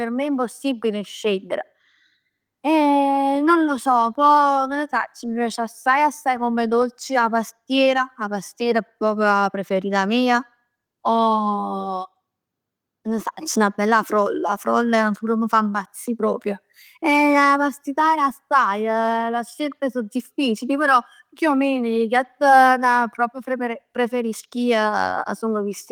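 Nothing here stands out as a technical fault, so there's no problem to point to anywhere in the speech recording.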